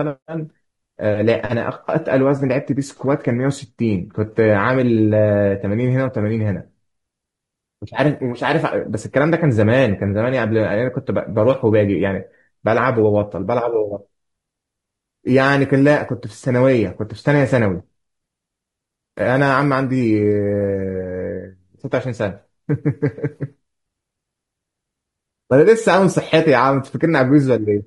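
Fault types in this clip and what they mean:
Low-delay AAC compression: throughout the speech the harmonics sound rough and grainy, with noise filling the gaps between them and a thin, synthetic-sounding top band, most likely from AAC-ELD at a low rate near 32 kbps.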